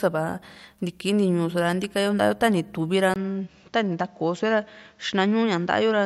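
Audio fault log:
3.14 s to end, input switched to a poorer device: A silence of about 20 ms marks the switch. After it, nothing comes through above 7.6 kHz, so the speech turns duller and loses its airy top. A new background noise appears, about 40 dB below the speech. The loudness stays about the same. The cause is likely a mid-recording change to a narrower-band microphone or headset profile, which brings its own tone and noise floor.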